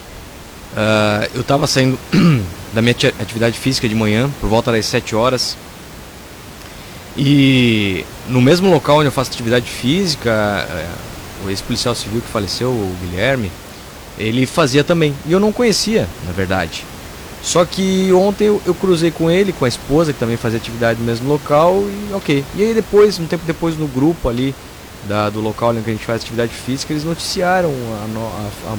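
No technical faults can be heard anywhere in the recording. The room's own background noise sits underneath the speech, about 17 dB below it, as part of the captured acoustic space.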